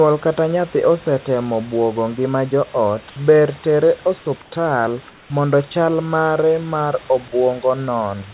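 At 4.42 s, right after "ngima joot ber tere", the room background is replaced for 100 ms by comfort noise. It happens again from 5.1 to 5.3 s, just before "mondo chal mare mar". Each time the real background, about 28 to 29 dB below the loud parts, turns smooth and featureless. It drops about 3 dB. This is likely discontinuous transmission, with the receiver synthesising noise in the pause. The whole clip stops at 4 kHz.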